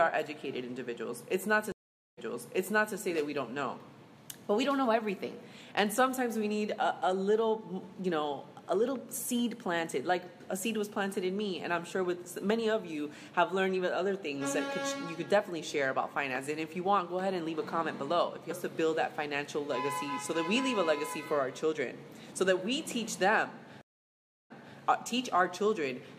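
At 1.72 to 2.96 s and 23.81 to 24.78 s, a stream reconnect drops the connection: the waveform goes flat for 0.45 s, then 0.69 s, and a fresh decoder resumes the sound 0.79 s and 0.28 s earlier, repeating material, entering with a brief fade-in visible as a short ramp.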